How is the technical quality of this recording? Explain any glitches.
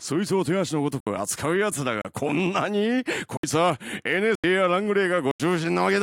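The recording has repeated dropouts. Blocks of digital silence occur at 1.00–1.07 s, 2.02–2.05 s, 3.37–3.44 s, 4.35–4.44 s and 5.31–5.40 s, lasting 33 to 85 ms. Each is a block of zeros, likely from an unfilled output buffer, and the last two span 4096 samples, so the sound cuts abruptly, heard as short holes.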